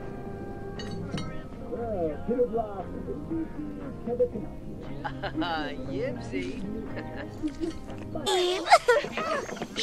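No technical faults are audible.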